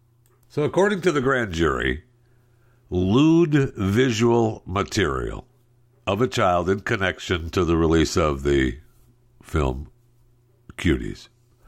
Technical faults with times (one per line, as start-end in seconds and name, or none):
none